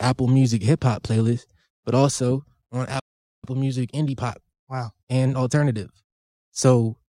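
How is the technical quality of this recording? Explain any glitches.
Two playback glitches disrupt the speech, one immediately after the other.

From 2.99 to 3.45 s there is a playback stall: the audio drops out for about 0.44 s, most likely because the player ran dry of data or its thread was blocked.

From 3.45 to 6.45 s there is a time-compressed catch-up: the player trims and cross-fades small segments to clear its backlog, so speech runs 1.1 times faster at normal pitch.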